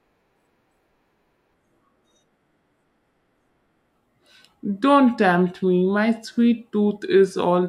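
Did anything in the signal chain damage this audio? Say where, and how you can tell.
Yes. From 1.54 s to the end, a section at the wrong speed: the speech drops to 0.81 times speed, about four semitones lower, slow and deep. Pitch and tempo shift together, so it's likely a playback or resampling stage running on the wrong clock.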